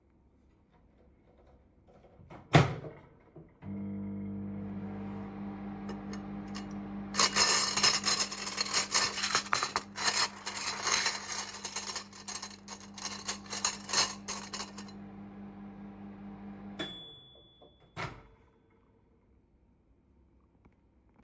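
No technical faults can be heard anywhere in this recording.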